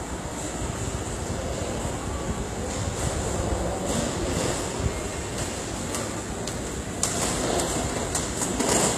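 A recording of sounds carrying plainly audible HE-AAC compression from start to finish: the treble sounds bright but gritty and metallic, likely from spectral band replication at a low rate consistent with about 20 kbps. A spectrogram would show repeated, blocky copies of lower bands above the crossover.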